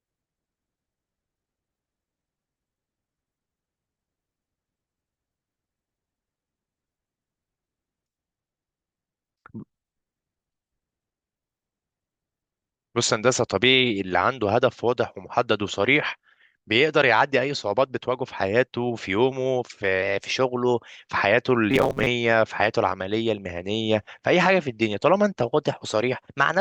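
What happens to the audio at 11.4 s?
Nothing goes wrong at 11.4 s: the speech there plays through intact, with no dropout, click, distortion or other fault.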